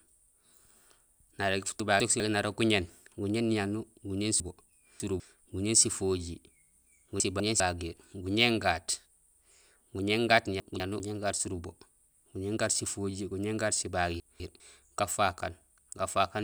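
Speech, with chunks out of order at five spots: 1.8 to 2.2 s, 4.4 to 5.2 s (after "niyanuur guñéén", before "guñéén sifojiir"), 7.2 to 7.6 s, 10.6 to 11.0 s (after "guñéén gaat") and 14.2 to 14.6 s (again after "guñéén gaat"). A 200 ms block of audio lands one chunk late, or three chunks late in the second case, so the sound briefly jumbles at the hard joins even though nothing is missing.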